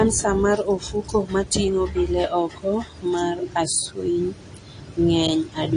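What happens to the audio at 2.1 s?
At 2.1 s you're hearing the same damage that runs through the whole clip: AAC compression, most likely AAC-LC at a low rate, with the plainly audible smearing you'd expect from something like 32 kbps. Nothing comes through above 10 kHz, so the speech sounds dull, and the codec's coarse quantisation of each frame's spectrum leaves a fizzy, warbling texture on sibilants and held sounds instead of a clean top end.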